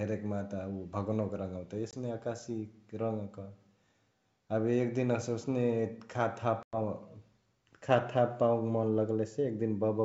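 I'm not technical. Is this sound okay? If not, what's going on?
No. The speech briefly drops out around 1.91 to 1.94 s and 6.63 to 6.78 s, which is packet loss on an ADPCM call. Each gap returns slightly distorted while the decoder resyncs.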